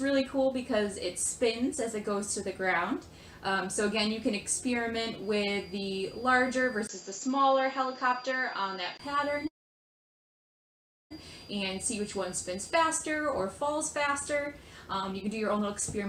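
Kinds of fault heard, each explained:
Feedback whistle: From 5.16 to 13.01 s a thin, steady tone at 4.8 kHz sits behind the sound, about 25 dB below it, swelling and fading slowly in level. The likely cause is a loudspeaker-to-microphone loop held just at the edge of feedback, so this one high frequency keeps ringing without building into a runaway howl, and it carries on underneath everything else until it drops away at 13.01 s.
Input switched to a poorer device: At 6.87 s there is a brief 20 ms dropout, and from then until 8.99 s the sound loses everything above 7.6 kHz and takes on a new noise floor about 30 dB below the signal. Loudness stays essentially the same. This points to the system likely changing its input mid-recording to a narrower-band microphone or a headset call profile, which brings its own tone and background noise.
Call audio freeze: From 9.47 to 11.12 s the audio stops, leaving about 1.61 s of silence in a 1.63 s stall, then resumes exactly where it left off with nothing lost. 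Packets were likely held up in transit and the jitter buffer ran dry, so the receiver briefly extended the last sound before falling silent. Everything afterwards now arrives 1.63 s later than before.
Jitter buffer speed-up: From 15.12 s to the end at 16.09 s the sound runs at 118% of normal speed while its pitch stays unchanged, giving it a hurried feel. The buffer was holding more audio than it aims for. To cut that extra delay, the receiver trimmed out short slices one or a few pitch periods long, many times in a row, removing about a fifth of a second in total.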